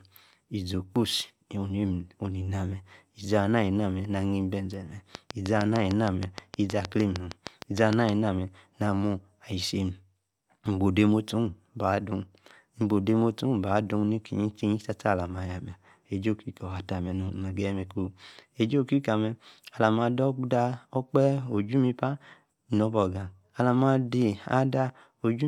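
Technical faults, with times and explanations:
5.15–8.1 s, train of clicks: regular ticking at about 6.5 per second, roughly twenty pulses well above the speech, likely interference from nearby equipment.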